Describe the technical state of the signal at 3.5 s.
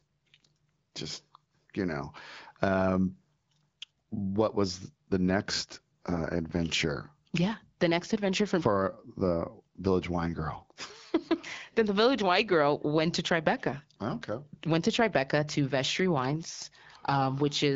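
At 3.5 s the signal is intact, with no fault at that moment, and the speech passes through the AMR wideband (HD Voice) codec at 12.65 kbit/s, where it stays clear.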